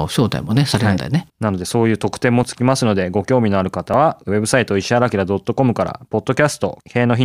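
Dropped buffers (overrun) at 2.43 s and 3.94 s in this speech clip: each is a jump ahead in the sound, losing roughly 10 ms and then 15 ms. These are likely audio the program failed to collect before the hardware overwrote it, with the surrounding audio spliced together.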